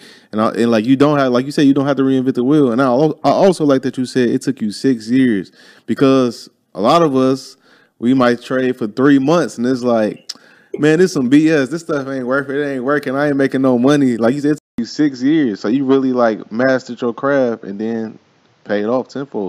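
At 14.58 s the speech drops out for about 200 ms, then comes back duller, with nothing above 7.4 kHz and a faint new noise floor well under the voice, though the level barely moves. That's likely the input switched to a poorer device, and it stays that way to the end.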